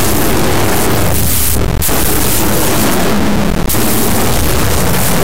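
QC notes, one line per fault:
Throughout: integer read as float. The audio is an extremely loud, harsh square-wave buzz that cuts to silence in the quietest stretches, which fits 32-bit integer samples being read as 32-bit float. The reinterpreted bit patterns come out either near zero or far past full scale, so the output flips between nothing and the limit. Ordinary clipping flattens only the loudest peaks, but here no gradation of level survives.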